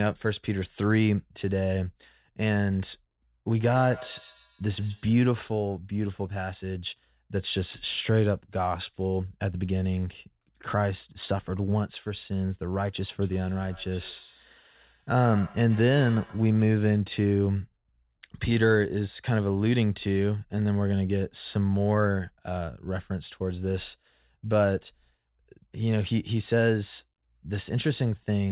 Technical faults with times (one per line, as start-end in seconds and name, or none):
3.59-5.19 feedback echo between two devices
13.22-16.72 feedback echo between two devices